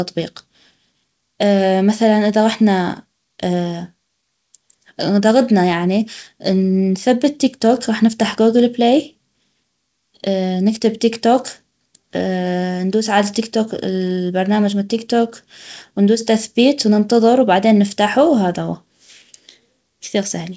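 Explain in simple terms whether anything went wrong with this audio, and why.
Something did go wrong. The speech carries clock drift between sender and receiver: the sending device's clock ran roughly 4 percent faster than the receiving one, so audio kept arriving slightly quicker than it could be played. Unlike a recording played back too fast, the voice's pitch doesn't rise. Instead the timing never quite settles, because the extra sound keeps piling up and has to be dealt with along the way.

That is what the repeated timing corrections are. From 0.06 s to 20.49 s the receiver keeps snipping out tiny slivers of sound to catch up, with the audio running at about 104 percent of its proper pace. Every edit removes material, and the edits come at uneven intervals. This is what separates them from network dropouts, which leave scattered gaps or glitches at random. The call connection passes nothing above 8 kHz, so the sound is a bit muffled at the top.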